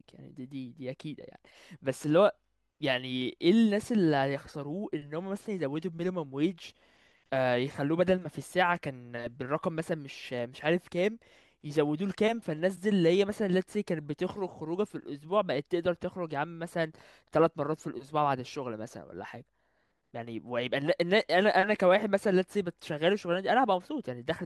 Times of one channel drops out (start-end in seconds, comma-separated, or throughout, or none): none